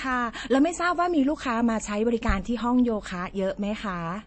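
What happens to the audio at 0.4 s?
At 0.4 s the sound sits inside a fault that runs through the whole clip: MP3 compression, likely at a low bitrate around 32 kbps. Short of bits, the encoder has discarded everything above 8.4 kHz and zeroed weaker frequency lines that flicker on and off between frames. The speech therefore sounds dull and clearly watery or swirly, with metallic chirps on s sounds and smeared attacks.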